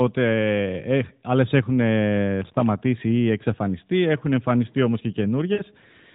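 At 5.54 s, just after "εμφανιστεί όμω και", the speech briefly smears into a held, fading buzz and then returns weak and rough by 5.63 s. These are lost AMR speech frames: about 40 ms of data failed its checksum, which fits two 20 ms frames. The decoder kept extending the last good pitch and vocal tract settings at falling gain. The narrowband AMR character, with nothing above 4 kHz, stays audible throughout.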